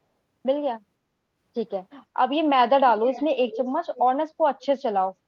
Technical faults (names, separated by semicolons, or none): echo leak